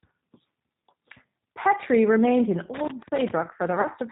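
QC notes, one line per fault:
throughout, G.729 codec: plainly audible roughness and a synthetic edge with nothing above 4 kHz, which fits 8 kbit/s speech rebuilt from filter, pitch and pulses.
2.74–3.31 s, loose connector crackle: right after "remained in", an irregular scratchy burst as a worn contact rapidly makes and breaks, chopping the signal.
3.81–3.88 s, VoIP packet loss concealed by the speech codec: a 40 ms hole the decoder fills by extrapolating from its last pitch and filter with fading gain, which fits two lost packets.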